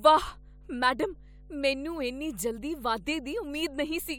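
A speech recording with mains hum running the whole way through: a steady 50 Hz drone, roughly 20 dB under the voice, from a ground loop or nearby transformer.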